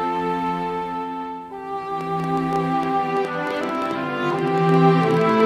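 From 2.01 s to 5.41 s, something outside the audio path, likely electrical interference from nearby equipment or a faulty connection or power supply, keeps injecting short pulses into the signal. The result is a train of clicks: around thirty near-identical pops at roughly 8.8 per second, spaced unevenly rather than ticking steadily. They peak about 10 dB above the underlying sound, so they stand out as a ragged popping that carries through to the end of the clip.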